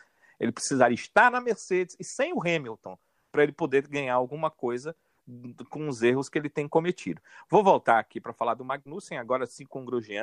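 No audible faults in this recording; nothing in the signal calls for attention.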